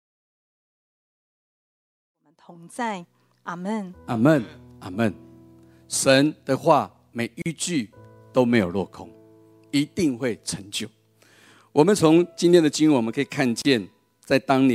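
At 7.42 s the sound drops out for about 40 ms, and again at 13.62 s for about 32 ms. These are gaps at a join of encoded pieces: separately encoded sections were spliced without trimming the encoder's leading delay and final-frame padding. Each gap sounds like a brief hole before the sound resumes where it left off. On a waveform it is a flat stretch with softened edges, and a spectrogram shows a thin blank column whose borders are slightly smeared. The fade-in ending near 3.4 s is smooth.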